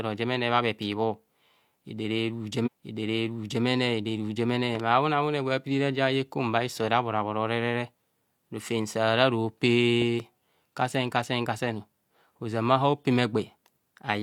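A stream segment repeated at 2.62 to 3.61 s: the player fetched or queued the same piece of the stream twice, so just under a second of the speech, about 0.98 s, plays a second time. At the point where playback jumps back to the start of the repeated stretch, there is a small blip. The speech then continues from where it had already been, running slightly later than it should.

A loud pop follows at 4.75 to 4.82 s, heard as two sharp pops in quick succession, peaking about 10 dB above the speech, which carries on underneath. The likely cause is a sudden voltage step or pulse entering the signal, from a plug, switch, static discharge or driver glitch, with the downstream circuitry shaping each pulse into a short thump. A second loud pop, again a double, comes at 10.02 to 10.22 s, after "rofem sara ro" and before "kasen kasen", at a similar level.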